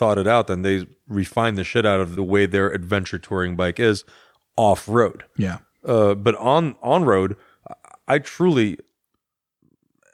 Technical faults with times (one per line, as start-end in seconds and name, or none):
2.16-2.20 compressed frames skipped